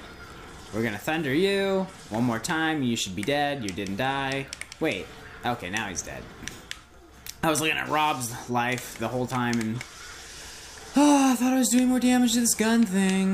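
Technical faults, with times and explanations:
No technical faults detected.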